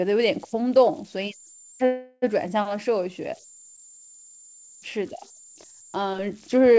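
Converter idle tones run through the whole speech clip: an undithered delta-sigma converter settles into repeating bit patterns on low-level input, producing a faint whistle around 7 kHz, just inside the call path's 8 kHz ceiling. It sits about 25 dB below the signal, most exposed in pauses.

A call audio freeze follows from 1.86 to 2.24 s. A 362 ms stretch of fading buzz from the last sound is inserted, and then the speech resumes where it stopped with nothing missing. The likely cause is delayed packets draining the jitter buffer.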